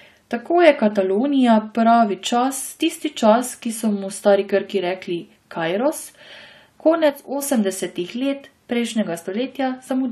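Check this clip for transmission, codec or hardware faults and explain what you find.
One fault stands out. From 7.10 to 7.42 s the speech drops abruptly by about 6 dB, holds flat, then snaps back. This is one channel drops out: one stereo side likely vanished, leaving the mono sum half the shared signal. Unlike a fade or gain ride, both edges are instant steps.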